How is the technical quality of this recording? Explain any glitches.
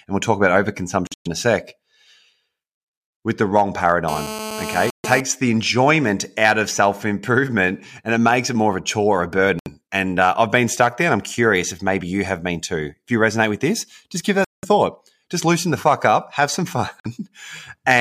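The recording has two faults: repeated short gaps in the speech, and a stretch of hard buzzing about a second long.

Bluetooth dropout: the speech cuts to silence at 1.07, 4.90, 9.59, 14.45 and 17.00 s, for roughly 160, 140, 70, 190 and 45 ms. The first gap is broken up over about 190 ms, with a longest hole of about 116 ms. The likely cause is wireless packets arriving too late and being discarded. Speech resumes further along, as though it kept running underneath.

GSM phone buzz: from 4.08 to 5.21 s a raspy, harmonic-rich buzz at 217 Hz sits about 9 dB below the speech. It is steady, as a nearby 2G handset on a call produces when the audio circuitry rectifies its pulsed transmissions. The buzz is unrelated to the speech and overlaps the 4.90 s gap.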